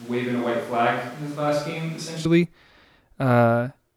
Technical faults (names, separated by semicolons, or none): switch to a distant microphone